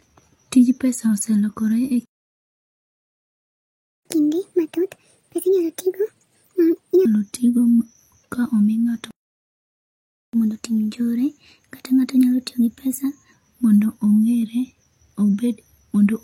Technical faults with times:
2.05-4.05 playback stall
4.05-7.05 catch-up at higher speed
9.11-10.33 playback stall
10.33-13.33 catch-up at higher speed

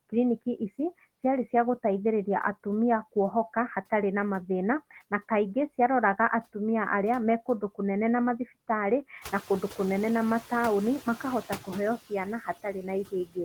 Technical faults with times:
0.00-13.45 noise suppressor artifacts
9.21-9.38 noise suppressor catching up
11.98-13.45 speech cut by the noise suppressor

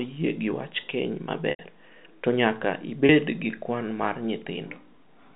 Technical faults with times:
1.50-1.59 packet loss with pitch repetition
3.06-3.09 packet loss with pitch repetition

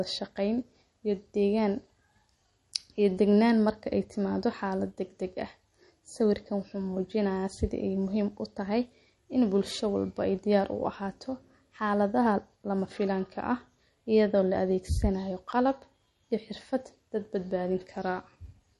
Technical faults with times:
0.00-18.79 MP3 compression

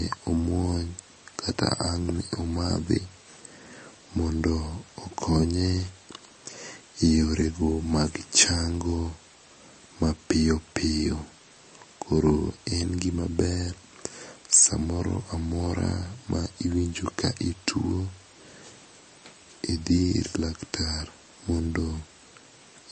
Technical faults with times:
0.00-22.91 MP3 compression

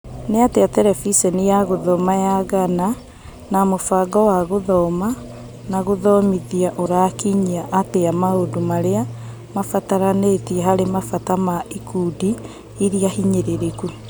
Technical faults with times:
6.86 dropped buffer (overrun)
7.94 dropped buffer (overrun)
13.12 dropped buffer (overrun)

